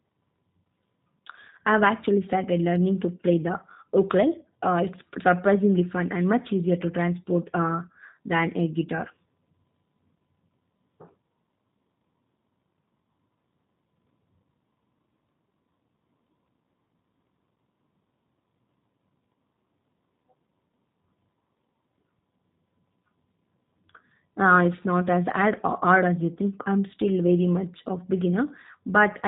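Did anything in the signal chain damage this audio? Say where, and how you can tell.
Yes, at the codec stage: G.729 coding runs through the whole speech clip. Nothing reaches above 4 kHz, and the voice has a plainly rough, synthetic edge, which fits an 8 kbit/s coder rebuilding each 10 ms frame from a filter model and a few pulses.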